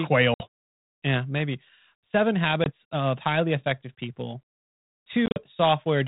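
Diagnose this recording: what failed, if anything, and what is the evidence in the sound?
Network packet loss on an ADPCM call: silent holes at 0.34–0.44 s, 2.64–2.71 s before "of highly effective people", and scattered at 5.26–5.39 s. Each resumes slightly distorted as the decoder's predictor resynchronises, showing as vertical spectrogram streaks.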